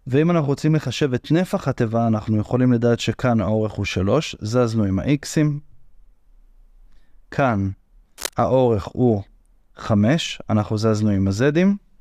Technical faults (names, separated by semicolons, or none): cable scratch noise